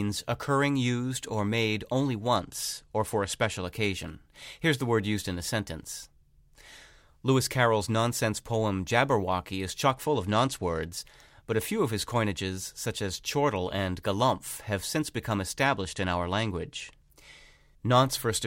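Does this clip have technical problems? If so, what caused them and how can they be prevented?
Yes, this speech has three short stretches of Bluetooth SBC bit pool drop: 2.36 to 3.62 s right after "used or made only", 9.9 to 10.9 s just before "but a few of", and 15.66 to 17.14 s after "galumph have since become". In each, the treble goes dull and a gritty noise creeps in, which fits the link dropping its bit pool from 31 to 14, around 99 kbps. With so few bits, the top sub-bands go nearly empty and everything else gets coarsely quantised until the rate recovers. Keeping the phone close with fewer competing 2.4 GHz devices, or fixing the bit pool higher, should prevent it.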